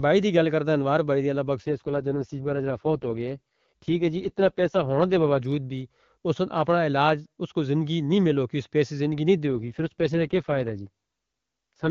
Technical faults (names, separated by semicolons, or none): AMR rate drop